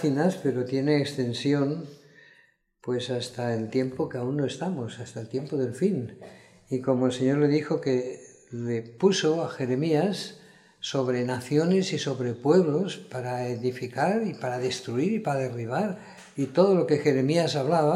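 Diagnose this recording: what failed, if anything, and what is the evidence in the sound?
Nothing in the signal chain appears to have failed: the sound shows no dropouts, clipping, glitches, level jumps or pitch and timing errors at any point.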